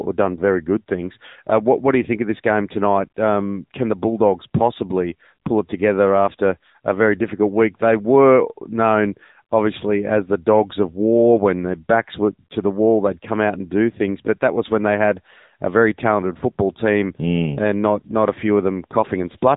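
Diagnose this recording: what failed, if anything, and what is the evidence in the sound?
The AMR narrowband mobile codec damage runs through the whole recording at the codec stage. The speech stops dead at about 3.8 kHz, with no air or sibilant detail above it, because the signal was squeezed into an 8 kHz-sampled telephone band. The voice has a plainly audible buzzy, synthetic edge: it was rebuilt from a vocal-tract model and sparse pulses in each 5 ms. The damage points to AMR-NB's mode around 8 kbps.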